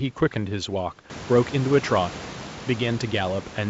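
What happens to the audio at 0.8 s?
Nothing goes wrong at 0.8 s: the speech passes through intact, with no dropout, glitch or distortion at that point.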